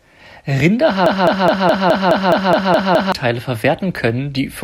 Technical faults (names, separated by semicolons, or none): broken-record loop